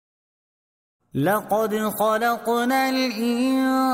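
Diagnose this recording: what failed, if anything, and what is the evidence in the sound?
Nothing failed; the opening fade-in is smooth.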